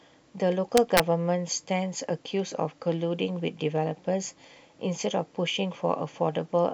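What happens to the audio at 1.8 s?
Nothing goes wrong at 1.8 s; the speech there plays through intact, with no dropout, click, distortion or glitch.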